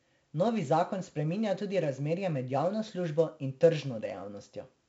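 From start to finish the speech carries heavy 4-bit ADPCM compression damage: gritty hiss riding every loud syllable, smeared attacks, and nothing above 7.8 kHz, which fits 64 kbps at a 16 kHz rate.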